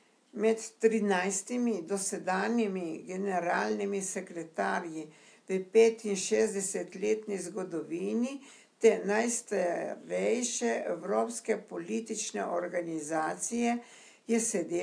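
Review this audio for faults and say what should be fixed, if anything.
Nothing here needs fixing.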